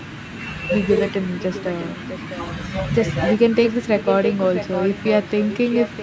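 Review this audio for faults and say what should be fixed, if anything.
An echo leak occurs at 4.06 to 4.35 s, 4.55 to 5.25 s and 5.49 to 6.02 s. A copy of the speech trails 0.66 s behind, about 5 dB down at first and then about 10 dB down. It likely comes from a loudspeaker whose echo canceller let its own playback back into the microphone. On a spectrogram it shows as duplicate harmonic patterns shifted 0.66 s later, and on the waveform the pauses fill with low-level energy. Tuning that side's echo cancellation or having it use a headset would prevent this.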